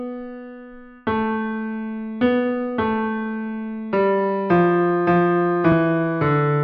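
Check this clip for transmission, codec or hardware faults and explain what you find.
One fault stands out, at 5.72 s: a tiny jump in the sound, where a few milliseconds of audio seem to vanish and the material on either side butts straight together without any gap of silence. This is likely a dropped buffer (overrun), in which the recording software failed to read a block of samples before the hardware wrote over it, so that stretch was lost and the stream skipped ahead.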